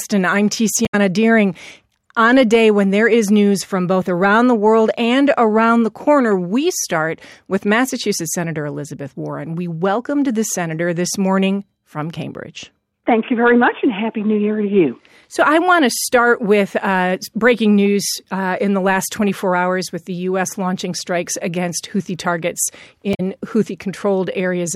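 Damaged data in a compressed stream strikes twice in this speech clip, from 0.85 to 0.95 s and again from 23.13 to 23.20 s. In both stretches bytes of the encoded stream were corrupted, so the decoder misread or rejected those frames, lost sync and had to hunt for the next valid frame header. Each break lasts under a tenth of a second and is heard as a brief disruption of the speech: a chirp, squawk, click or momentary gap.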